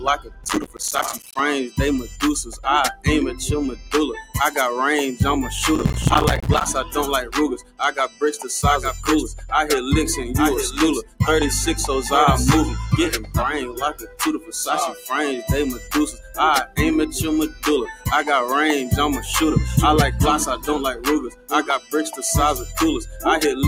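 A noise suppressor applied to music or sounds runs throughout, reading sustained material as noise and turning it down; level swings by roughly 10 dB, so held sound and tails pump and thin. From 0 to 4.36 s, sound is cut by the noise suppressor, dipping about 15 dB as steady passages are pulled down while onsets survive. Inside that span, from 0.44 to 1.39 s, processor overload crackle appears: dozens of audio blocks miss their deadline and drop to silence. The short, hard-edged gaps fit a buffer of about 5 ms and merge into a gritty tearing. The same crackle returns from 5.76 to 6.70 s with fewer dropouts. Further suppressor cuts follow at 6.84 to 8.22 s (about 19 dB), 11.02 to 11.2 s (about 17 dB), 13.15 to 15.08 s (about 16 dB), 15.73 to 16.79 s (about 13 dB), 17.49 to 18.07 s (about 11 dB) and 20.56 to 22.2 s (about 18 dB). Each sinks or truncates decaying sound.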